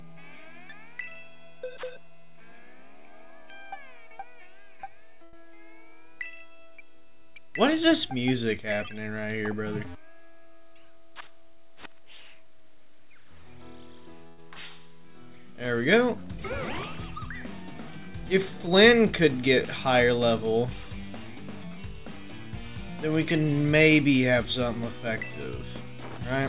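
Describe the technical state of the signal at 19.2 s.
At 19.2 s the audio is intact, with no dropout, glitch or other fault, and it carries the narrow band of a call path that leaves nothing above 4 kHz.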